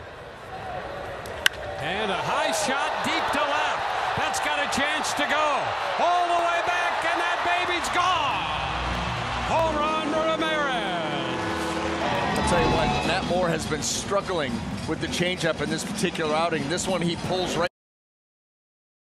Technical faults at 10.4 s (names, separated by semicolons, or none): clock drift buffer slips